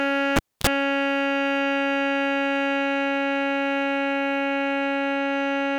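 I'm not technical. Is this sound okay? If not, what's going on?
No. There is a cable pulled and plugged in between 0.36 and 0.67 s. A live lead comes out of its socket, so the music drops with a pop into near silence for about a quarter of a second. As the plug goes back in, only its tip touches at first, which lets in a short burst of buzz (about 35 ms) from the 60 Hz mains electricity. A second pop follows as the music returns.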